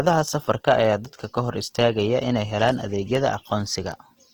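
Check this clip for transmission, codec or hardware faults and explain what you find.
Two faults stand out: codec damage across the whole clip, and a train of sharp ticks through most of it.

Opus compression affects the full clip. The speech sounds grainy and rough, with a noisy texture on voiced sounds rather than swirling. The likely cause is Opus in its music (CELT) mode at a low rate, which fits roughly 16 kbps. It keeps each band's energy but fills starved bands with folded or noise-like content. On a spectrogram the bands look smeared and speckled rather than holed, and the content stays fullband up to about 20.2 kHz.

Word clock ticks begin at 0.47 s and repeat about every 0.4 s until 4.3 s, around ten in all, each a sharp tick of uneven strength. The receiving device runs on its own clock, not locked to the sender, and the two drift apart by roughly 70 ppm. Each time they slip, a single sample is dropped or repeated. 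On the waveform each tick is a one-sample discontinuity. On the spectrogram each shows as a thin vertical line across all frequencies, evenly spaced.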